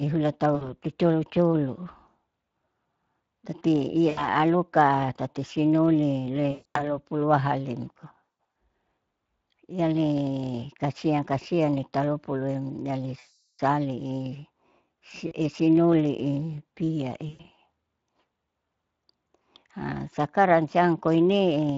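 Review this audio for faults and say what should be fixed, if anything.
The speech was carried through the Speex codec at a quality setting that leaves too few bits for the excitation signal, and the damage is plainly audible the whole way through. The low-bit excitation roughens the voice into a noisy, hoarse texture, consistent with a setting around 20 kbps. To prevent it, run Speex at a higher quality mode or move to a modern codec such as Opus.

VoIP packet loss concealed by the speech codec occurs at 0.55–0.72 s, 4.09–4.28 s, 6.51–6.96 s, 8.44 s, 13.19–13.60 s, 15.27–15.34 s and 17.29–17.50 s. Packets went missing and the decoder filled each gap by repeating its last pitch and filter with falling gain. The voice smears into a buzzy tone or coloured noise that fades out, worst around 13.2 s where about 400 ms was lost. At 6.5 s the losses are scattered over about 240 ms, and at 8.44 s they are scattered over about 320 ms. 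Because each decoded frame builds on the previous one, the voice stays weak and distorted briefly after each gap. To prevent it, add forward error correction or redundancy and a properly sized jitter buffer on the network path.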